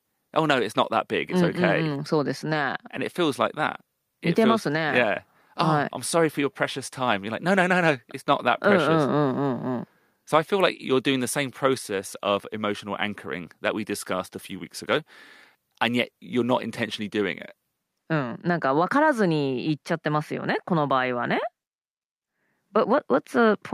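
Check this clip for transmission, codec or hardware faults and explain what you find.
Nothing in the clip points to a fault. There is nothing in the speech that calls for an explanation.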